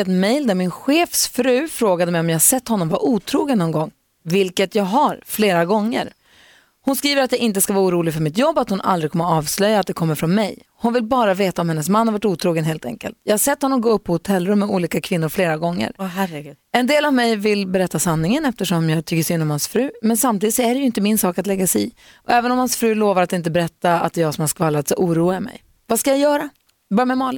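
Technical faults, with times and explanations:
Nothing technical stands out anywhere in this speech recording, so there's no fault to list.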